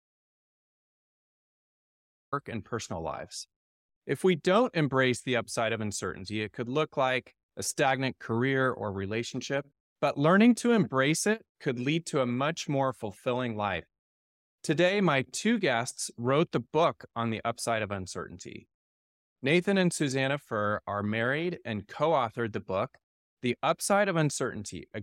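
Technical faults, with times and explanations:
0.00–2.32 s, audio dropout to silence: the speech opens on dead digital silence with no room tone, then starts abruptly mid-phrase at "and personal lives", likely because the input was lost and silence was written. A natural pause would leave some background hiss.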